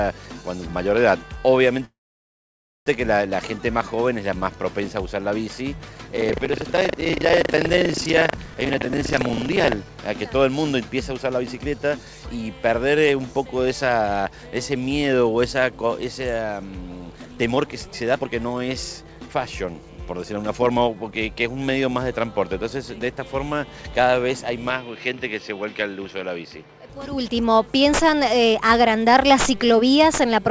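At 1.85 s the sound stops and a short fading tail gives way to about 0.92 s of silence. Playback resumes at 2.89 s with nothing lost. This is a call audio freeze, likely from held-up packets draining the jitter buffer.

From 6.14 to 9.77 s a 25 Hz robotic rattle rides on the signal. This is buffer tearing: roughly a fifth of each period replays audio about 70 ms old, which fits a 40 ms buffer period.

Jitter buffer speed-up trims pitch periods to cut delay. The sound runs about 110% fast from 11.32 to 12.14 s, removing around 0.1 s, and about 120% fast from 17.16 to 21.57 s, removing roughly a second, with pitch unchanged.

From 24.70 to 26.90 s the sound turns duller. The level also drops about 5 dB, with no gap at the change. This is likely an input switched to a poorer device.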